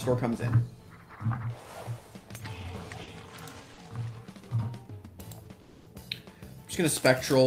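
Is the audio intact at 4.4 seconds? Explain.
Yes, at 4.4 seconds the audio plays through cleanly with no dropout, click, distortion or other fault.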